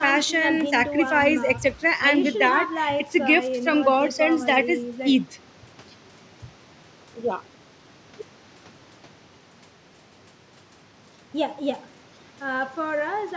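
Nothing stood out on listening to this speech: the faint room noise sits about 30 dB below the voice, and the call's microphone processing leaves no content above 8 kHz.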